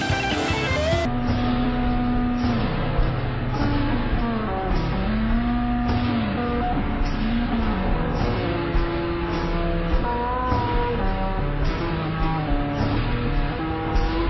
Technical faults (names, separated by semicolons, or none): wrong sample rate